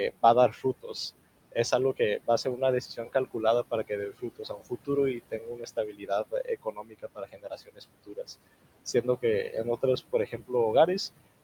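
Noise suppressor artifacts run through the whole clip: the room noise, sitting about 15 dB under the speech, is pulled down by about 20 dB between phrases. Speech cut by the noise suppressor follows at 0.21–0.95, 1.97–2.61, 2.95–3.36, 3.71–8.29 and 8.86–10.51 s. Quiet speech mistaken for noise drops by about 18 to 22 dB and sounds swallowed, worst over roughly two seconds within the 3.71–8.29 s stretch.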